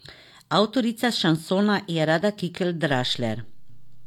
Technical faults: DC step

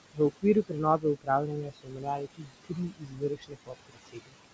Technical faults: noise suppressor artifacts; speech cut by the noise suppressor

